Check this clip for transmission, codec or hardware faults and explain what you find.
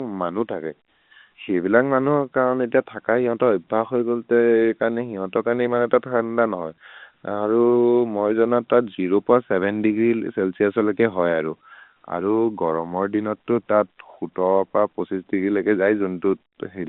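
Nothing stood out on listening to this speech recording, which comes across as an ordinary telephone-band line.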